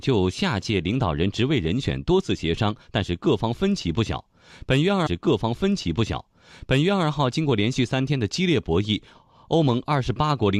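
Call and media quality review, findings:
Stream segment repeated, 5.06–7.06 s: about 2.0 s of speech replays after a small blip at the jump back. Player/segment fetcher queued the same segment twice.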